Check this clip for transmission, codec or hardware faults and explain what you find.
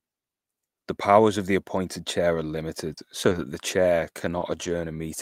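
The clip has short concealed packet loss in four places: 2.93–2.99 s, 3.29–3.33 s just before "that the chair", then 4.39–4.43 s and 4.63–4.67 s after "that the chair". Audio arrived too late each time. The receiver extended the preceding sound for 40 ms, then 20 ms each for the other three, then blended back. Each gap is a brief smear or wobble.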